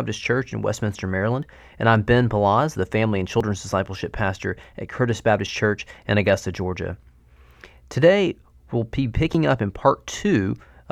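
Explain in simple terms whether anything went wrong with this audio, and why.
Sound skips at 1.43 s, at 3.41 s between "the family and" and "discipleship pastor at", and at 9.35 s between "we'll be" and "up in". That's audio missing between chunks, likely the recorder dropping about a fiftieth of a second at each 2-second handover.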